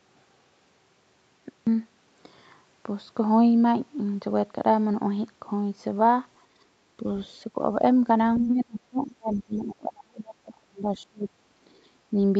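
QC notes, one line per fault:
6.47–6.70 s and 11.73–11.95 s, background gated by the echo canceller: the room tone under the speech sags by about 9 dB and then about 7 dB for roughly a fifth of a second each time. The canceller clamped the microphone while the loudspeaker played, then released it.
6.98–7.04 s, 7.46–7.55 s and 8.38–11.28 s, speech suppressed in double talk: two brief dips of about 5 dB pull the voice down, then nearly three seconds are pushed down by about 35 dB. This is likely the canceller confusing both talkers with echo and ducking them together.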